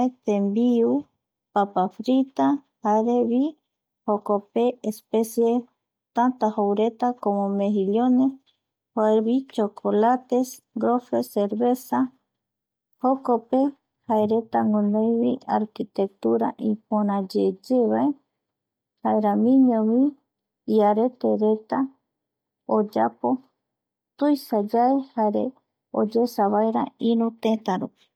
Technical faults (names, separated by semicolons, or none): none